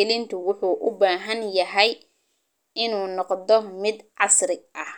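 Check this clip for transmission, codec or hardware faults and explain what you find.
Nothing stood out on listening to this speech recording that would point to a transmission, codec or hardware problem.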